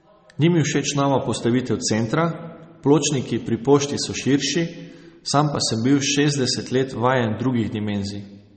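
From start to finish, the speech carries the marks of likely MP3 compression, and the damage is plainly audible. Nothing remains above 8.4 kHz, where the encoder has cut the treble to save bits, which fits a low bitrate around 32 kbps. Weak frequency lines drop in and out between frames, giving a watery, swirling texture, with metallic chirps on sibilants and smeared consonant attacks.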